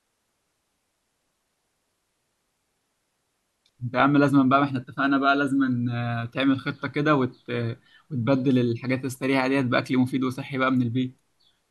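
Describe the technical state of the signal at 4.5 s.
No fault is audible at 4.5 s: the speech signal is intact at that moment.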